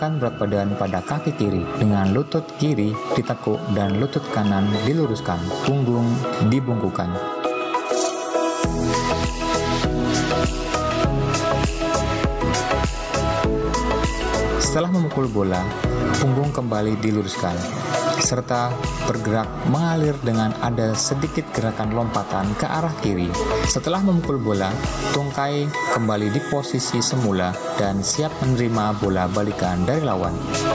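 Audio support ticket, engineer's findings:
Gain pumping throughout: gain ducks around 20 dB under each loud sound, dynamics squashed flat. Likely mic gain way too hot, with a fast limiter clamping down.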